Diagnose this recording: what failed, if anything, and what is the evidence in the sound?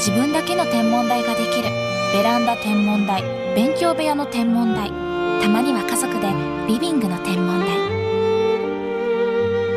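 Nothing failed; no fault is audible in this recording.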